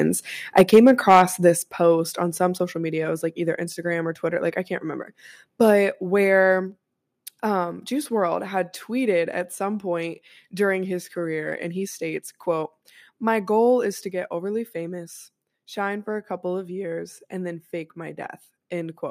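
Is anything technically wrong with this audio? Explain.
Yes, there are two related faults in this speech clip.

From 0.57 to 1.22 s there is microphone overload. The loudest syllables have a harsh, crackling edge where the waveform tops are flattened, with peaks about 6 dB beyond what the converter could hold and a few percent of samples squared off. The likely cause is input gain set too high, driving peaks into the converter's ceiling. The distortion sits only on the peaks, which is what separates it from a level change.

The microphone volume is stepped down three times, at 0.61 s (about 3 dB), 1.62 s (about 5 dB) and 14.1 s (about 1 dB). Each is an instant drop in loudness affecting voice and background together, with no added harshness. That pattern points to call software that heard overload and likely cut the device's input gain in single steps. The first falls within the distorted stretch and the second follows it, and the last is a small trim.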